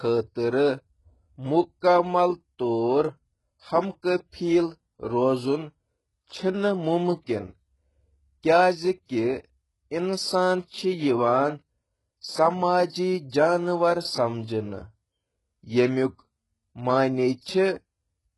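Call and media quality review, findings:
Gritty, lispy treble throughout; nothing above 11.5 kHz, heavy coding damage. Likely HE-AAC compression, around 12 kbps: treble rebuilt by band replication, harmonics misaligned.

Pre-echo, 12.87–12.92 s: short hiss spread over about 51 ms before an attack, onset smeared. Transform codec spreading quantisation noise across the block ahead of the transient.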